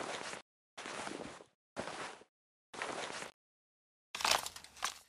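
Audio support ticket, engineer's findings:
Robotic rattling buzz at 50 Hz from 3.2 s to 5.08 s, present only with signal. Buffer tearing: write and read positions crossing inside every 20 ms period, so a few percent of each buffer holds audio about 40 ms old, hard-joined on both sides.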